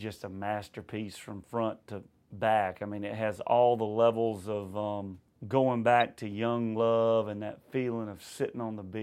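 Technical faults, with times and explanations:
6.01 s, corrupt frame decoded: a short blip of misplaced energy, peaking at about -30 dBFS and lasting only a couple of frames. Damaged bits in the compressed data were decoded anyway, so wrong gains and misread spectral codes briefly produced energy at incorrect frequencies.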